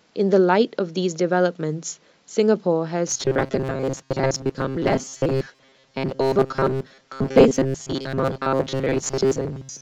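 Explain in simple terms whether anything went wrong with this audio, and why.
Something did go wrong. From 3.07 s to the end at 9.82 s, the speech turns into robotic sound from repeated short buffers: a stiff, metallic buzz fixed at 134 Hz that still loosely follows the speaking. The likely cause is new audio arriving too seldom, so the playback repeats a tiny slice, which fits about 7.5 ms, over and over, roughly 70 percent of the time, while much of the real speech is skipped.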